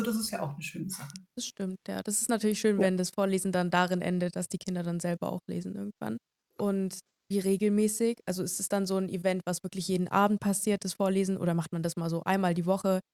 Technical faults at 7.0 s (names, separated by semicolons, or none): none